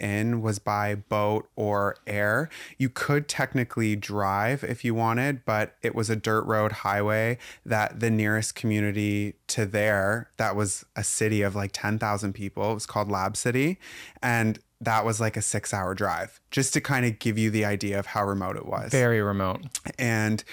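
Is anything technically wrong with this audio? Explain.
Yes. Throughout, crude rate conversion leaves a gritty, inharmonic fizz riding loud, bright speech. It fits a 32 kHz to 48 kHz step by repeating samples unfiltered, with error only about 20 dB down. Unlike steady hiss, it comes and goes with the speech.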